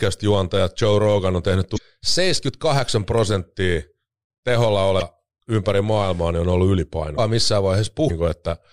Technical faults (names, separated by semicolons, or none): damaged data in a compressed stream